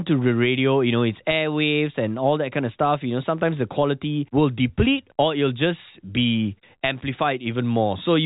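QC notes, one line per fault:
No faults found in the speech. The G.711 telephone coding is working as intended, with nothing heard above about 3.8 kHz and at most a faint trace of the codec's level-following quantisation noise.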